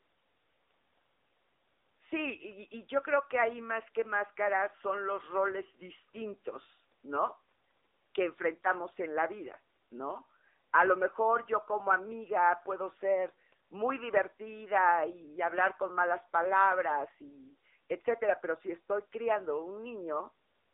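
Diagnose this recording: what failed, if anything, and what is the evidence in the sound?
Codec stage: the AMR narrowband mobile codec throughout. Its sparse-pulse vocal-tract model makes the speech buzzy, fitting about 8 kbps. The spectrogram is empty above 3.7 kHz.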